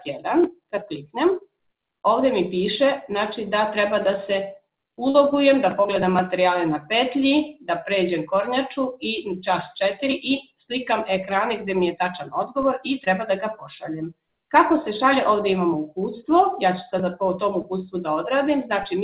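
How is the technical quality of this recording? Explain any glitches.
The recording has two kinds of glitch: three short dropouts that were covered over, and one low-frequency jump in the waveform's baseline. It came through a WebRTC call path whose G.711 mu-law codec leaves nothing above 4 kHz, which fits a 64 kbps telephone-grade link.

Short concealed packet loss occurs at 5.10 s (about 40 ms), 13.04 s (about 20 ms) and 17.62 s (about 20 ms). Each time, a stretch of audio failed to reach the decoder in time. The receiver filled the gap by extending the preceding sound, either as a continuation of its pitch or as shaped noise, and then blended back into the real signal. Each one is heard as a brief smear or wobble. On a spectrogram each appears as a short patch where the pattern is smoothed or repeated instead of changing naturally. The 5.10 s patch is roughly twice as wide as the other two.

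A DC step occurs at 12.63 s. The waveform's zero line jumps abruptly to a new offset, as when a converter recalibrates or an input carrying an offset is switched in. The offset then decays away at the rate of a 20 Hz high-pass, so it fades within a fraction of a second. It is heard as a low thump or click while the sound continues unchanged. On a waveform, the whole trace shifts off centre and curves back. On a spectrogram it shows as a short burst of energy at the very bottom of the frequency range.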